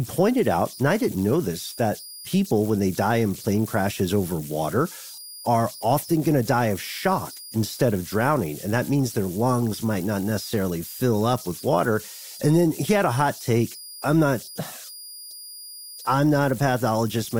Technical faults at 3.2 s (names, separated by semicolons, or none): converter idle tones